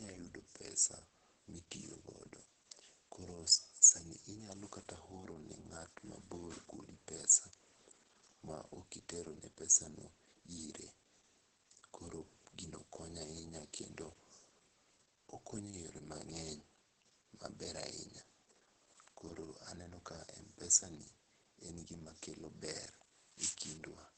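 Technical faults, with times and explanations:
throughout: Opus voice compression. The speech stops near 9.1 kHz, so it sounds muffled. The SILK coder models the voice by linear prediction and codes the excitation coarsely, leaving it hoarse and slightly robotic. The heavy damage points to a bitrate near 10 kbps.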